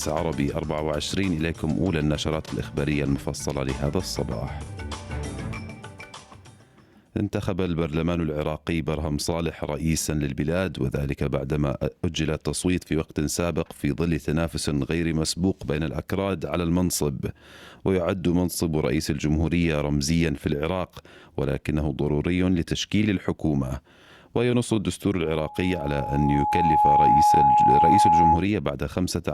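From 25.25 to 28.45 s a loudspeaker feedback squeal sets in: an 840 Hz tone swells over roughly a second and a half to about 10 dB above the sound, as the microphone re-amplifies its own loudspeaker. Unlike a steady hum or interference tone, it grows by itself before stopping.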